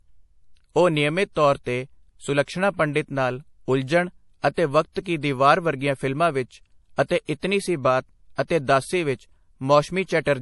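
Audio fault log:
Throughout: MP3 compression. Nothing reaches above 11.5 kHz, and the speech carries a plainly audible watery, swirling texture as weak frequency lines drop in and out from frame to frame. Unlike a plain low-pass filter, this damage shifts constantly, likely from a bitrate near 48 kbps.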